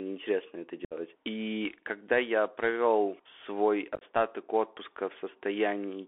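Throughout, the speech is limited to a 0.3 to 3.4 kHz band and has the plainly audible damage of a Bluetooth CVSD headset codec, consistent with a 64 kbps link. The one-bit delta coding tracks loud high content poorly, so sibilants turn scratchy and a granular hiss sits under the speech.

At 0.85 to 0.94 s, unconcealed Bluetooth headset packet loss cuts about 60 ms from the audio, which fits roughly seven lost packets. Nothing fills the gap, so a hard-edged hole opens and the speech returns briefly quieter. A second burst at 3.95 to 4.03 s, just after "когда я провел свой", drops about 45 ms in scattered pieces across 60 ms, the longest run 22.5 ms, producing a short rough, chopped crackle.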